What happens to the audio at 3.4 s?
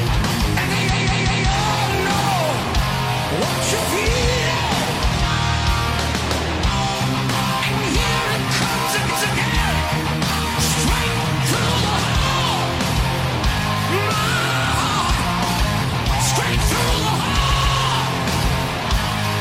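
Nothing goes wrong at 3.4 s; the audio plays through that moment intact, with no dropout, click, distortion or other fault.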